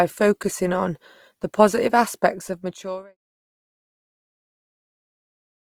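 Throughout the speech, grainy, rough texture replaces clean detail, with high bands filled by folded or noise-like energy rather than dropping out. This is likely Opus compression in its music mode at full bandwidth, starved at a rate that fits around 24 kbps. The smooth fade-out ending near 3.17 s carries the same graininess down to silence.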